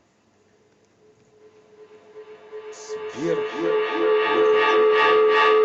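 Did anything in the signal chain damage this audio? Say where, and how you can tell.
Yes. Feedback howl takes over this speech from 1.4 s to the end of the clip, a call-processing and room-acoustics fault: a microphone and a loudspeaker in the same room are joined by the call, so each pass round the loop comes back louder. The repeats, roughly 400 ms apart, narrow to a tone around 400 Hz that peaks about 12 dB above the speech. On a spectrogram it is a bright horizontal band that grows stronger. On a waveform the envelope swells and stays high.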